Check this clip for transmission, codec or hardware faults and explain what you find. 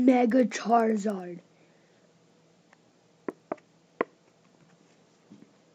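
One fault runs through the whole clip: the resampler restarted on every block. Each 100 ms block was converted from 16 kHz to 48 kHz in isolation, so every edge carries a small error, heard as steady ticks at 10 Hz whenever sound is present.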